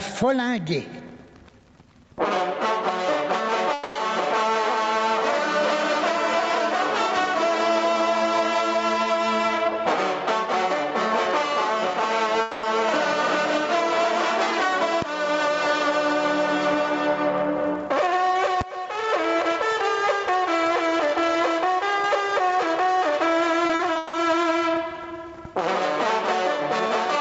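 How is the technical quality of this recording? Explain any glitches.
The recording has several clear technical problems: constant level pumping, two concealed gaps, two full-scale bangs and a short choppy stretch near the end.

Gain pumping runs through the whole clip. The input gain is likely set far too high, so a fast limiter or compressor clamps down on every loud moment and releases in between. The gain swings by around 15 dB as it clamps and releases. Loud and quiet passages sit unnaturally close together, and the audio sounds flattened and breathing.

Long network dropouts occur at 3.73 to 3.97 s and at 12.41 to 12.65 s. In each case, about 220 ms of audio likely never reached the receiver. The receiver bridged each hole by stretching the last received sound into a fading buzz or hiss rather than falling silent. Playback then resumes further along, and the lost portion is simply gone, so the flow jumps at each point.

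Invalid numbers at full scale cause two bangs, at 15.02 s and 18.61 s. A processing calculation produced infinite or undefined values, which were forced to the maximum sample value for one block. The first lasts about 1.45 ms, which fits a 64-sample block. The second lasts about 5.8 ms, which fits a 256-sample block. Both are so short that each is heard as a single sharp, very loud click.

Repeated packet loss (robotic sound) affects 23.67 to 24.15 s. Four separate gaps follow one another in quick succession, the longest 160 ms, and concealment fills roughly half of that half-second. Each gap is patched by extending the preceding sound, and the next gap arrives before the audio recovers. The result is choppy sound with fragments missing. Throughout, the call codec path also limits the audio to nothing above 8 kHz.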